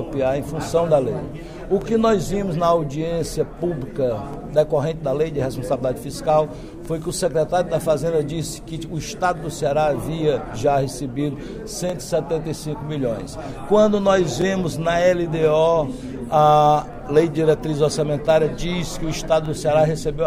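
Overlapping chunks appear at 1.82–1.84, 4.34–4.36, 6.86–6.88, 9.38–9.40, 11.90–11.92, 14.42–14.44, 16.94–16.96 and 19.46–19.48 s. The audio was handled in 2.5 s chunks, each starting 20 ms before the previous one ended. That short slice plays twice at every join, giving a regular click or stutter.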